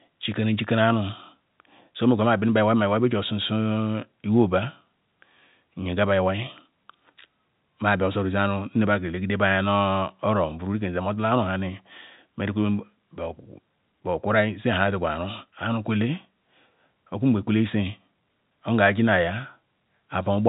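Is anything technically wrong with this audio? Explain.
No, nothing's wrong here; the speech just has the narrow telephone-band sound of ordinary G.711 phone coding, with nothing above about 3.8 kHz.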